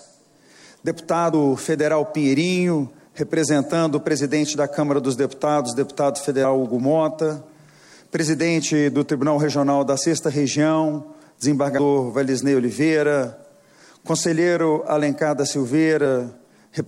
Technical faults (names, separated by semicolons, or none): compressed frames skipped